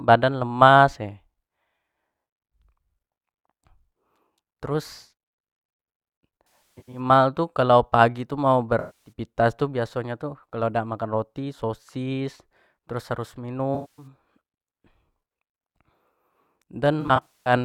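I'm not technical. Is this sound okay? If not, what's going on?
No. The speech has AAC frame loss with concealment at 6.73 to 7.00, 8.79 to 9.12, 13.74 to 14.07 and 17.01 to 17.53 seconds. Small pieces of the compressed audio went missing. The player filled each gap from the preceding sound, so these spots sound smeared and noisy.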